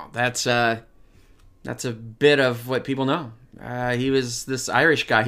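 From 0.49 to 1.16 s, speech runs 6.3% fast and 106 cents sharp, snapping back at "that's a bit of"; likely a drift correction step.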